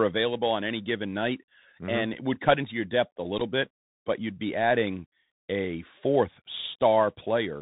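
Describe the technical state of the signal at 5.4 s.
At 5.4 s the speech is still going through the Bluetooth CVSD headset codec, as it does for the whole clip: everything above 4 kHz is gone, and the one-bit up-down coding, which fits a 64 kbps stream, leaves a plain granular hiss and scratchy s sounds.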